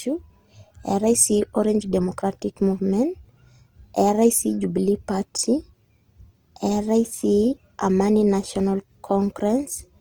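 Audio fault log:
throughout, Opus compression: the speech keeps its full bandwidth, but its tonal parts turn rough, grainy and noisy, and the damage is plainly audible. This is likely Opus in its CELT music mode at a low rate, consistent with about 24 kbps. The encoder preserves each band's energy but, short of bits, rebuilds fine structure by folding lower bands or injecting noise, so texture replaces detail.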